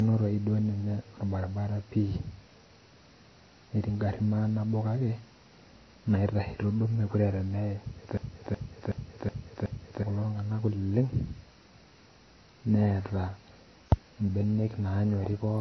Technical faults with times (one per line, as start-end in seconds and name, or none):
0.00-15.60 transcoding between lossy codecs
8.17-10.03 system hang loop